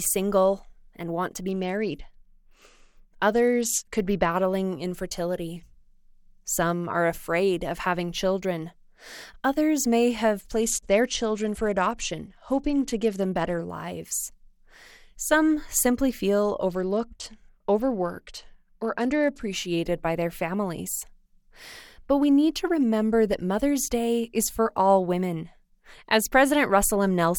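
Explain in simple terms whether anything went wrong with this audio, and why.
Three times the speech turns dull and gritty: 1.47–4.36 s after "want to", 10.63–13.6 s after "may have", and 16.69–19.45 s after "simply feel", clearing at "by their families". This is a Bluetooth SBC bit pool drop. The wireless link squeezed the sound into far fewer bits, so it lost its crisp highs and picked up the grit.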